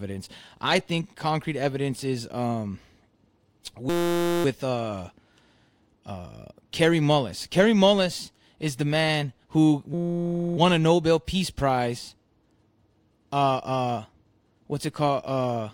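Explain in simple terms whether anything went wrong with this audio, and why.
At 3.90 to 4.45 s, and again at 9.94 to 10.57 s right after "is the man who", a system hang loop replaces the speech with a steady 172 Hz buzz. The playback froze and replayed one 5.8 ms scrap over and over, which fits a 256-sample buffer. Because that repeated piece is so short, it comes out as a buzz rather than a stutter or a gap.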